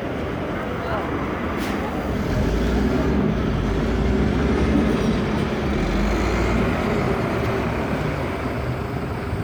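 No technical faults can be heard anywhere in this recording of sounds. Nothing in the signal path draws attention to itself at any point.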